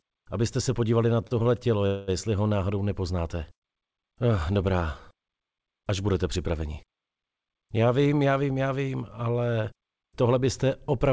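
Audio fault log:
1.22–1.47 s, repeated stalls (stutter): three brief holds, the longest 36 ms, together filling 74 ms, almost a third of that span. Packets arrived too slowly and the jitter buffer kept running dry, so the last sound was extended each time. On a spectrogram, short horizontal smears interrupt the sound. Nothing is lost, only dragged.
1.86–2.10 s, call audio freeze: a 213 ms stretch where the sound hangs as a fading buzz or hiss rather than dropping to silence, then resumes exactly where it left off, now 213 ms later. The likely cause is packets held up in transit, emptying the jitter buffer. The waveform shows a decaying, repetitive block, and the spectrogram shows horizontal smearing below the 8 kHz ceiling of the call codec.
3.55–3.64 s, short stall from a late packet: one packet missed its slot, so the receiver stretched the preceding sound for 74 ms until it arrived, then continued with no loss. 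It is heard as a held sound with a slight buzz or dip. The spectrogram shows a short frozen, smeared patch, and the waveform shows a small repeated cycle.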